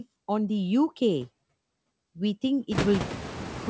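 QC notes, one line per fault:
Throughout, noise suppressor artifacts: the suppressor classes frequency bands as steady noise frame by frame and pulls them down by up to about 19 dB, so the background drops away between phrases and swells back under the speech. The room noise climbs by about 25 dB near 2.5 s, leaving it only about 10 dB below the speech. The leftover noise sits in a band ending at 8 kHz that fits a G.722 wideband call.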